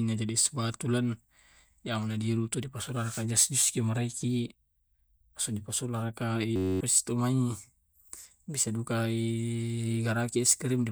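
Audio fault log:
6.56 to 6.81 s, system hang loop: the computer or its audio driver stalled while the sound hardware kept replaying the same ring buffer, a slice about 10.67 ms long, which fits a 512-sample buffer. That slice repeats 23 times at 93.8 Hz. Because the repeating slice is so short, the speech gives way to a steady, flat buzz rather than a stutter, and roughly a third of a second of real audio is missing when the sound resumes.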